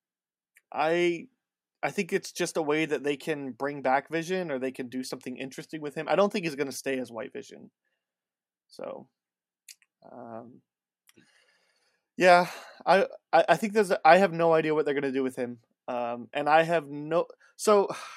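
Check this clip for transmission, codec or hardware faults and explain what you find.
No transmission, codec or hardware fault can be heard anywhere in the speech. There is nothing to report.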